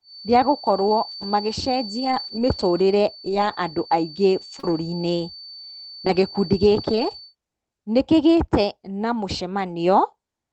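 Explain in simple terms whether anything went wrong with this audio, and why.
Yes, a few things went wrong.

From the start until about 7.36 s, a thin, steady whistle sits quietly behind the speech, a single high pitch near 4.5 kHz that wavers a little in strength. This is a feedback whistle. It is likely caused by sound from a loudspeaker leaking back into the microphone and circling round the loop, so that one pitch keeps ringing without growing into a full howl.

At several moments the speech turns briefly rough and grainy: once very briefly at 0.87 s, then from 1.99 to 2.41 s, 3.25 to 3.55 s, 4.63 to 4.69 s and 6.75 to 7.13 s. Each is a lost packet rebuilt from error correction. Pieces of the call went missing in transit, but the next piece carried a cruder spare copy, and the receiver played that instead. There is no silence, just a coarser, noisier patch.

From 4.59 to 4.65 s there is a quick smear or wobble. 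This is a short concealed packet loss. About 40 milliseconds never arrived in time and no spare copy covered it, so the receiver guessed by stretching the sound just before the hole and then blended back into the real audio. A short sound falling in that gap could vanish.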